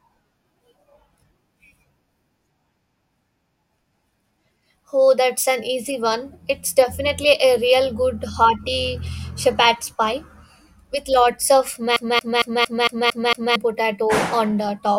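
From 11.96 to 13.56 s the speech sticks like a CD stuck on one turn, replaying one 227 ms slice seven times, showing as identical repeating spectrogram blocks.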